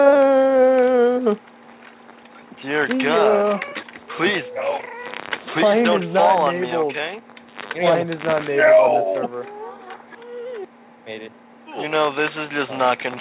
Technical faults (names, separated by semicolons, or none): none